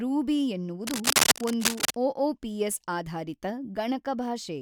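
From 0.83 to 1.96 s, cable scratch noise, likely a worn connector, crackles louder than the speech, showing as dense broadband streaks on a spectrogram.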